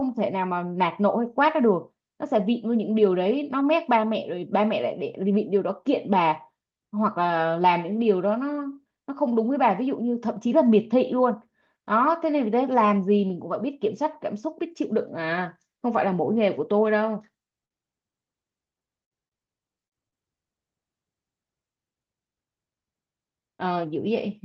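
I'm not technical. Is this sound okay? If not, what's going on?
No, there are a few glitches from the internet call this speech passed through.

Short stall from a late packet, at 17.65 to 17.80 s and again at 18.11 to 18.16 s: a piece of audio arrived late, so the receiving end ran out of sound to play. It covered the wait by stretching the last bit of sound, for about 51 ms the first time and 17 ms the second. Nothing is lost, but the sound briefly hangs or wobbles before carrying on.

Repeated packet loss (robotic sound), from 19.04 to 20.22 s: here pieces of audio went missing or came too late four times in quick succession. Each time the receiver patched the hole by continuing the previous sound, about 192 ms of patching in total, with the longest gap 63 ms. About 60 ms of real sound is gone, and this stretch comes out choppy with pieces missing.

Jitter buffer speed-up, from 23.66 to 23.93 s: after the delays, audio had piled up in the receiver's waiting area. 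To catch up, it snipped out many tiny slices, roughly a twentieth of a second in all. The speech there plays about 15% faster without changing pitch, so it sounds briefly rushed.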